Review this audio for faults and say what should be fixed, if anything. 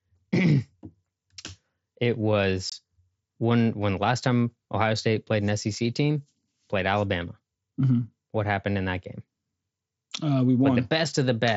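At 2.70 to 2.72 s there is unconcealed Bluetooth headset packet loss. The speech drops out for about 22.5 ms, which fits roughly three lost mSBC frames. The link between headset and phone failed to deliver those packets. Nothing was rebuilt in their place. Silence or an idle pattern filled the gap instead. The hole has abrupt edges, so it cuts the speech sharply and can click. The mSBC wideband codec adds a light grain on loud sounds. To prevent this, enable packet loss concealment on the mSBC link and keep the headset close to the phone, away from 2.4 GHz interference.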